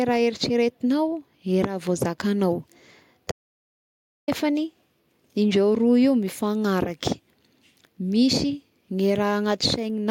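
A speech recording with an audio dropout to silence from 3.31 s to 4.28 s, roughly 0.96 s of silence with no room tone, which sets it apart from a natural pause or gated noise floor. The input was likely lost while recording continued.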